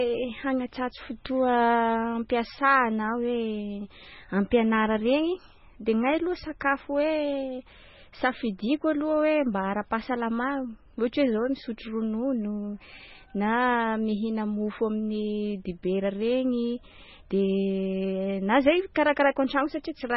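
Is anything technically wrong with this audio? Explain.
Yes. Throughout the speech there is heavy damage of the kind MP3 compression leaves, likely from encoding at a very low bitrate, which fits something around 16 kbps. Nothing is present above 5.6 kHz, because the encoder discards the top band outright when bits are scarce. The sound is also watery and swirling, as weak frequency lines drop in and out between frames. That flickering sets it apart from a plain low-pass filter, which dulls the treble but leaves what remains steady.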